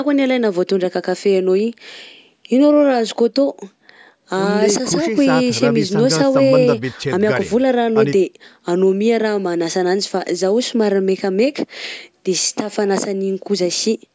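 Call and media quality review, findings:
No faults found in speech.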